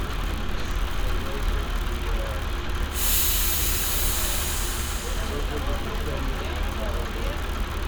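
Nothing goes wrong anywhere in these everyday sounds, with no technical faults turning up at any point.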